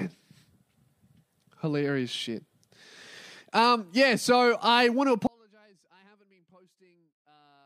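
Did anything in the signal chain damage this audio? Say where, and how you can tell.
Yes. After "so I want to", at 5.27 s the speech cuts abruptly, not fading, to a faint residue about 35 dB down: an audio dropout, likely in analogue wiring.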